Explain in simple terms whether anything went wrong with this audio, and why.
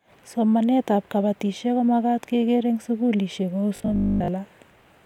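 Yes, briefly. The system likely wasn't receiving new audio fast enough, so it kept repeating one tiny piece to fill the gaps. From 3.76 to 4.28 s this gives robotic sound from repeated short buffers, with most of the speech replaced by a flat metallic buzz at 50 Hz.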